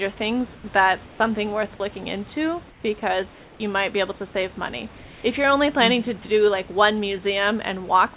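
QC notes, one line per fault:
0.56–0.64 s, 1.06–1.20 s, 2.70–2.84 s, 3.34–3.60 s and 4.98–5.24 s: comfort noise in place of the background. The sender likely stopped transmitting during these pauses, so the receiver filled each 80 to 260 ms gap with synthetic noise. The room's real background gives way to a flat, featureless hiss about 1 to 5 dB quieter.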